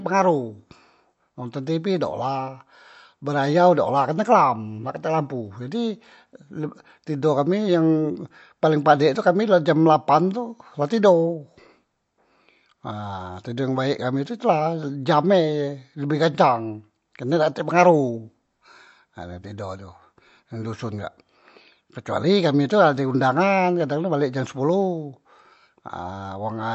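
Throughout, the speech has nothing above 7.9 kHz and a watery, swirly texture on sibilants, likely MP3 compression at a low bitrate, around 48 kbps, dropping weak frequency lines.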